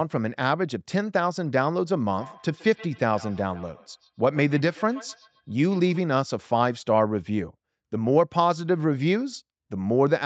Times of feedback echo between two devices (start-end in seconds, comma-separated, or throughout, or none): 2.11-6.06